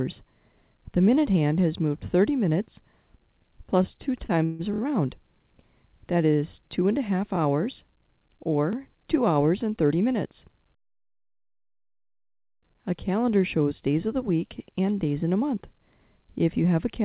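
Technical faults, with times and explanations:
3.95–4.61 s, repeated stalls (stutter): the sound catches and drags five times, the longest hold lasting 142 ms. Packets arrived late, so the jitter buffer ran dry and the receiver stretched the last sound to fill about 221 ms, a third of the span, with nothing lost.
9.63–10.15 s and 15.34–16.0 s, jitter buffer speed-up: the sound briefly hurries, at 112% and then 109% speed with unchanged pitch. Too much audio had built up in the buffer, so the receiver trimmed short pitch-period pieces, roughly 70 ms each time, to reduce delay.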